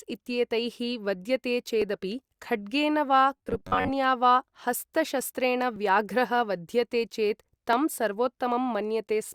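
A regular click or small pop punctuates the speech from 1.82 s to 7.73 s, about four in all, spaced almost exactly 1.98 s apart. These are clock drift buffer slips. The likely cause is two devices running on independent clocks that disagree by something like 700 parts per million. The buffer between them slowly drifts until a small block of samples, on the order of 70, is dropped or repeated, and each jump leaves an audible discontinuity.

Between 3.37 s and 3.91 s the speech turns into a rigid, metallic buzz with a fixed pitch of 93.8 Hz. The syllables are still loosely traceable through the drone. This is robotic sound from repeated short buffers. New audio was likely arriving too infrequently, so the playback filled the gaps by looping the last fragment of about 10.7 ms, the period that matches the 93.8 Hz buzz. Roughly half of the audio in that span was repeated material rather than real signal.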